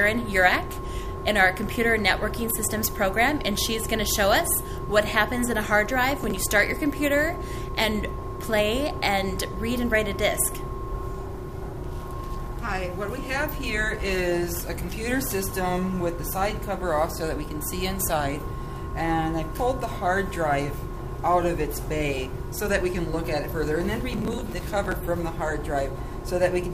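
A gritty, tearing crackle rides on the sound from 6.11 to 6.67 s and again, denser, from 24.13 to 24.92 s. This is processor overload crackle: repeated missed deadlines skip buffers of a few milliseconds each, leaving hard-edged gaps, with roughly ten misses in the first burst and roughly thirty in the second.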